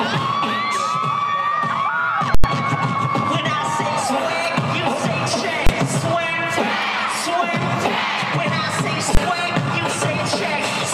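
At 2.35 s the output jumps to one extreme value and stays there until 2.44 s. This is invalid numbers at full scale. A calculation produced infinite or invalid values, which became the largest positive or negative value. The block lasts about 93 ms, which fits a 4096-sample block. It sounds like a very loud pop, a gap with no sound, then another pop. At 5.67 s and 9.15 s shorter blocks of about 23 ms do the same. Each is heard as a single bang.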